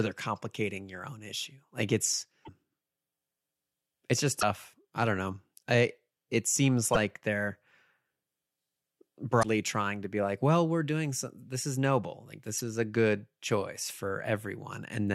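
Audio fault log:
2.42–2.49 s, 4.38–4.43 s (after "it's just"), 6.94–6.97 s, 9.39–9.45 s (before "trying to be like"), 12.58–12.61 s (after "this is noble like"): damaged data in a compressed stream. Each brief glitch comes from the decoder misreading corrupted frames and resyncing.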